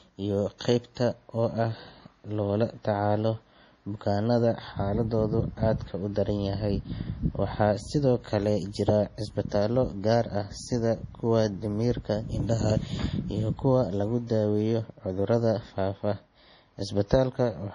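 From the first moment to the last, the speech sounds watery and swirly, with metallic chirps on s sounds and nothing above 10.6 kHz. This heavy damage is likely from MP3 compression starved of bits, which fits a bitrate around 32 kbps: the encoder cuts the treble and drops weak frequency lines that flicker frame to frame.

From 0.95 to 0.97 s, a brief hiss of about 20 ms comes just before a sharp attack, which lands soft and smeared. This is pre-echo: the codec spreads its quantisation noise across the whole block, so noise meant for the loud onset also fills the quiet moment before it.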